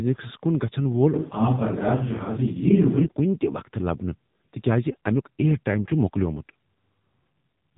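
It's a speech clip run through an AMR narrowband mobile codec for its whole length. Nothing above 3.8 kHz gets through, and heavy damage from vocal-tract modelling makes the voice buzzy and synthetic, a level of damage that points to a low rate of around 6.7 kbps.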